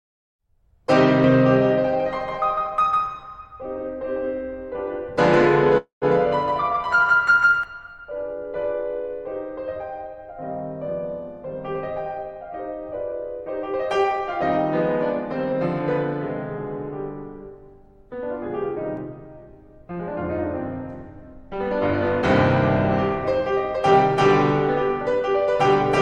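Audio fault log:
1.24–7.64 s, doubled audio track: a full-band copy of the music trails roughly 150 ms behind at about 5 dB down, with no room colour, most likely a second, slower capture path.
5.77–6.05 s, call audio freeze: the sound hangs as a fading buzz or hiss, then silence for about 130 ms. Nothing is lost, but it adds 242 ms of delay, likely from delayed packets.
11.74–14.20 s and 23.31–25.47 s, jitter buffer speed-up: the receiver trims about a tenth of a second each time, so the music runs faster at 104% and then 105%, with the same pitch but an unsteady tempo.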